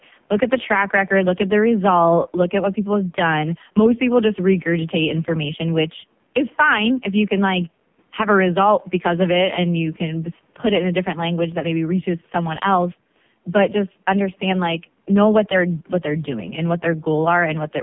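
A speech recording, heard throughout as buzzy, synthetic and boxed in, with nothing above 3.4 kHz and thin bass below 150 Hz. That is an AMR narrowband mobile codec under heavy strain, rebuilding the voice from a crude vocal-tract model at a low rate, which fits AMR-NB's 5.15 kbps mode.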